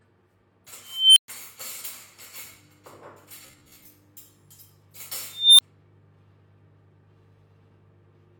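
A recording of everyday sounds with two kinds of trouble. There's an unstable filter blowing up twice: from 0.80 to 1.28 s a tone around 3 kHz swells over about 358 ms, clips, then drops to 120 ms of silence. From 5.26 to 5.61 s a tone near 4 kHz builds over about 326 ms before a brief 20 ms dropout. Both times a recursive filter's output runs away until it overflows and resets. Between 3.47 and 3.85 s the audio turns into a stiff metallic buzz at 66.8 Hz, likely robotic sound from repeated short buffers. The software loops roughly 15 ms chunks to cover late data, so about half the real audio is skipped.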